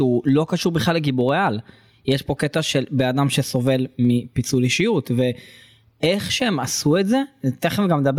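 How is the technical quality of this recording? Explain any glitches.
The recording has a clear technical problem: gain pumping runs through the whole clip. The likely cause is input gain set far too high for the microphone, with a fast limiter or compressor clamping down on every loud syllable of speech and letting go in the pauses. The level swings by roughly ten decibels. The speech ends up squashed, with loud and soft parts pressed unnaturally close together.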